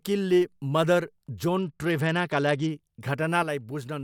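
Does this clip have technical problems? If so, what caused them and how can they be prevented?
Yes, there are two. From 1.58 to 2.71 s there is a Bluetooth SBC bit pool drop. The link came under strain and the encoder cut its bit budget, which fits a bit pool falling from 31 to 11, near 83 kbps. The highest sub-bands got few or no bits and the rest were coarsely quantised, so the speech turns dull and gritty. On a spectrogram the upper bands thin out or go blank over that span, replaced by grainy speckle, and then fill back in when the rate recovers. Keeping the phone close, clearing the 2.4 GHz band of competing traffic, or using a codec with a steadier bitrate would prevent it.

From 3.43 s to the end, the level falls abruptly by about 6 dB, and anything present in only one side would vanish. The likely cause is that one channel drops out and the remaining signal is folded to mono, halving what both channels shared. 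On a waveform the envelope steps down to roughly half its height at 3.43 s and stays there. A secure connector and a stable stereo link, checked before recording, would prevent this.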